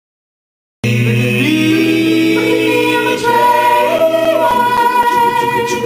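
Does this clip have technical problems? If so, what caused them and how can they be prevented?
Yes: CD scratch ticks, eight between 3.47 and 5.29 s, about four a second, the longest a few milliseconds. Each disc revolution overwhelms error correction, showing as thin vertical spectrogram lines and waveform notches. Cleaning or resurfacing the disc and using secure multi-pass ripping would prevent it.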